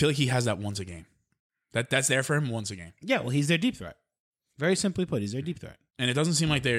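No technical faults can be heard anywhere in the speech. Nothing in the recording stands out as a fault worth describing.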